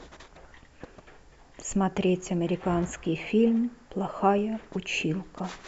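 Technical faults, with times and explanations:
Nothing stood out as a technical problem on listening to this speech recording.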